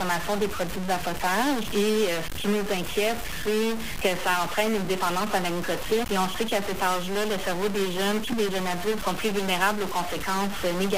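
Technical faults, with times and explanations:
throughout, stuck bit: harsh, buzzy distortion coats the audio and quiet gaps fill with noise, likely one data bit stuck, shifting affected samples by roughly -30 dBFS.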